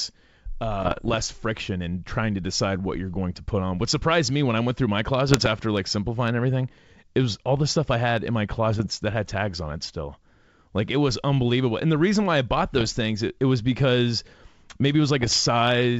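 Speech carried over a G.722 wideband link, with clear band-limited audio up to about 7 kHz, is broken up by bit errors on an ADPCM link at 0.80–1.15 s, at 5.28–5.47 s after "I went through my", at 8.71–8.91 s, at 12.76–12.87 s after "reason why I bought", and at 15.22–15.38 s after "was because maybe it". Each burst is a cluster of pops and rough, gritty patches with brief level jumps. A corrupted code word throws the decoder's step size and predictor off, so the damage rings on for milliseconds before it recovers. The roughness points to an error rate of about half a percent to one percent.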